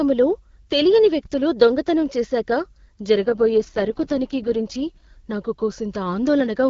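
From 3.26 s to 5.06 s the speech turns rough and synthetic, with no gap and no loss of bandwidth. This is an AMR rate drop, where a weak link forces fewer bits for the voice. The sound fits AMR-WB falling from 12.65 to 6.6 kbit/s, then recovering.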